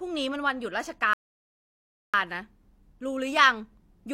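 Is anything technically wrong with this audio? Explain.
Yes. From 1.13 to 2.14 s there is a playback stall. The speech cuts out for about 1.0 s, likely because the player ran out of buffered data, then resumes. It shows as a flat, empty gap in the waveform and spectrogram.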